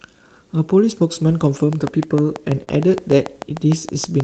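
Speech, carried over a call link whose band tops out near 8 kHz, consistent with Opus at a low bitrate around 20 kbps. From 1.73 s to the end at 4.23 s runs a train of clicks. The clicks are alike in shape. They arrive at a steady 6.7 per second. They sit well above the speech, peaking around 10 dB over it. They tick through the pauses as well. The likely source is electrical interference or a faulty connection or power supply. Between 2.17 s and 2.99 s there are scattered short gaps. About four small packet losses occur here. The receiver covered each by extending the preceding sound. Roughly 50 ms in total was filled, the longest patch near 30 ms. This is a small share of that stretch. It shows up as brief hiccups and smears. The stretch ends up about 13 ms longer.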